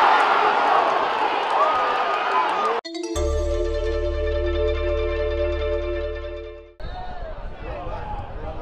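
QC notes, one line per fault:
No faults found. Nothing in the audio needs a QC line.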